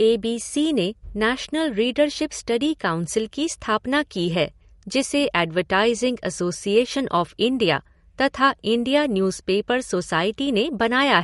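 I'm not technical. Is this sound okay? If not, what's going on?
No. Throughout the speech, from start to finish, there's plainly audible damage that sounds like MP3 compression. It's likely caused by saving the file at a low quality setting. To make the file small, the encoder threw away everything above 11.2 kHz, so the top end sounds dull. It also dropped quiet detail that flickers in and out, which gives a watery, swirly quality, with metallic chirps on s sounds.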